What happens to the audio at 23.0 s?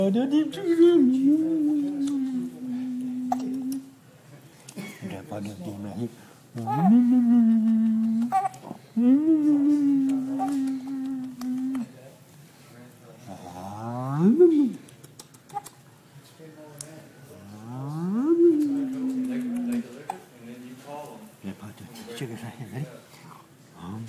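Nothing goes wrong at 23.0 s; the audio plays through that moment intact, with no dropout, click or distortion.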